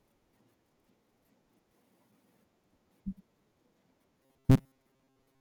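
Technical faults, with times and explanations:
4.23 to 5.41 s, robotic sound from repeated short buffers: the speech turns into a rigid, metallic buzz fixed at 133 Hz that only loosely follows the words. The likely cause is audio arriving too seldom, so a fragment of about 7.5 ms is looped to fill the gaps while most of the real signal, around seven tenths, is skipped. A spectrogram shows evenly spaced 133 Hz harmonics in place of natural formant movement, and the waveform shows one short cycle repeating.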